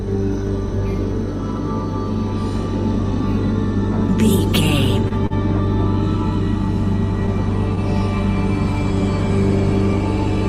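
Twice in quick succession a packet arrived late, leaving the jitter buffer empty: a short stall from a late packet at 5.08 to 5.14 s, then another at 5.27 to 5.33 s. Each time the receiver stretched the last sound to cover the gap, 21 ms and then 39 ms, and resumed where it stopped, so nothing is lost but playback falls further behind. Both spots sound like a brief hold with a faint buzzy smear.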